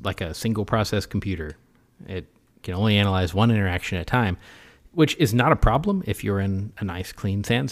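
No dropouts, clicks, distortion or other technical faults can be heard anywhere in the recording.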